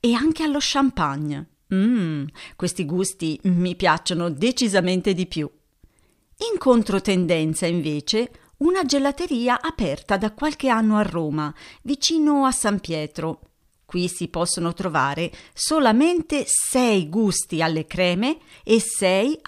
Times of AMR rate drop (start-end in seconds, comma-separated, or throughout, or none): none